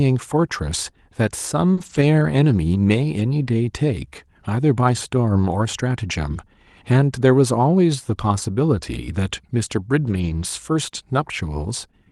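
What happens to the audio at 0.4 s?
Nothing goes wrong at 0.4 s: the speech comes through intact, carried normally by the WebRTC call path.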